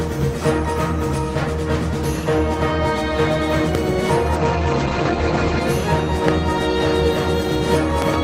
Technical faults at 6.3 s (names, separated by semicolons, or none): loud pop